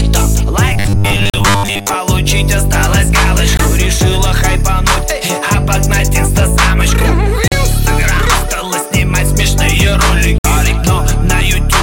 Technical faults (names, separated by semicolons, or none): robotic sound from repeated short buffers; Bluetooth dropout